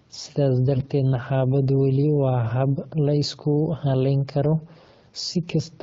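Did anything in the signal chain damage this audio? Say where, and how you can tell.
Yes. AMR bit errors hit from 0.76 to 0.90 s, at the network stage. The speech there turns hoarse and gargly while its pitch and loudness stay roughly in place. The span of about 140 ms fits roughly seven 20 ms AMR frames. Those frames arrived over a weak link with a few percent of their less-protected bits flipped, so the checksum still passed and the AMR-WB decoder used them. The excitation pulses landed in the wrong positions, and the fine gain and spectral values went astray. Around that span, the clear wideband speech fits the 12.65 kbit/s mode.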